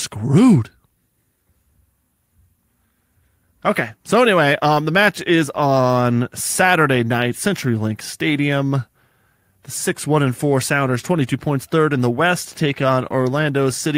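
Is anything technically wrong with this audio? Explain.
No, nothing technically wrong can be heard in this speech recording. The sound carries no audible defect that would point to a problem anywhere in how it was captured or delivered.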